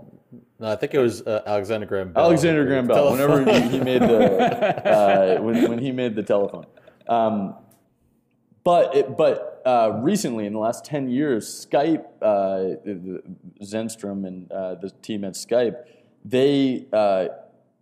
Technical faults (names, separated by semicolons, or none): none